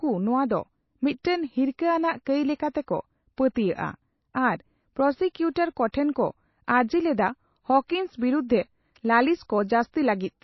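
Speech, and throughout it has a dull, watery quality with plainly audible codec damage and nothing at all above 5.8 kHz. That hard treble ceiling and the swirly texture point to MP3 compression as the likely cause, which fits a starved bitrate somewhere around 24 kbps, where the encoder drops the top end and lets weak frequency lines flicker. You can also hear pre-echo at 1.23 s, at 3.54 s right after "ᱠᱟᱹᱭ ᱞᱮᱠᱟᱛᱮᱠᱚ", and at 7.88 s between "ᱠᱚ ᱟᱹᱨᱡᱤ ᱞᱮᱫᱟ" and "ᱵᱤᱨᱩᱫᱷᱨᱮ ᱞᱟᱹᱞᱤᱥ". Each time a brief smear of hiss, about 15 to 16 ms long, creeps in just ahead of a sharp onset, because the codec's noise for that block leaks into the quiet moment before the attack.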